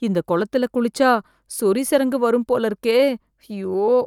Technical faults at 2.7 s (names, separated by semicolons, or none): none